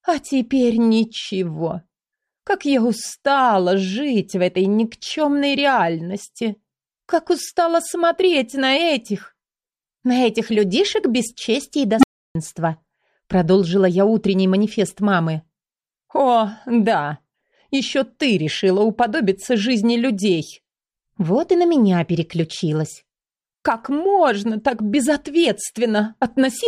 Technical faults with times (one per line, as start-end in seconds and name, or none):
11.98-12.35 unstable filter